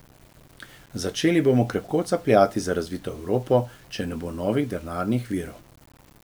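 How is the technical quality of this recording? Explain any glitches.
The quality's rough: the whole six seconds of speech has a gritty, grainy layer riding on it. That's low bit depth without dither, likely from the audio being rounded onto a coarse grid of levels, which fits an 8-bit signal, with no noise added to smooth out the steps. Because the rounding error tracks the waveform, the grit changes with the speech. It sits only around 30 dB below the signal, and the quiet tails break up and sputter.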